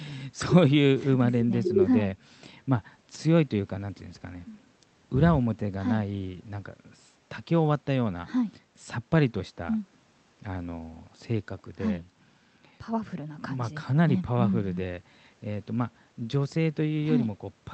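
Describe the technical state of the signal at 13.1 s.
At 13.1 s the speech is intact, with no fault present, only the ordinary coding character of the Opus call path that carries it.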